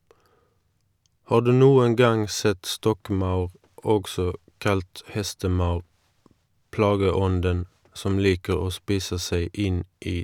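No technical faults can be heard anywhere in the recording.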